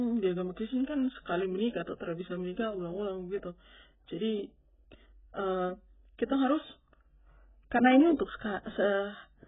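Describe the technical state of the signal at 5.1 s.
At 5.1 s the speech shows AAC compression damage, present through the whole clip. Nothing survives above about 3.8 kHz. The damage is heavy: dull, smeared tone with warbling, fizzy sibilants. This most likely comes from AAC-LC at a very low bitrate, near 8 kbps, quantising coarsely.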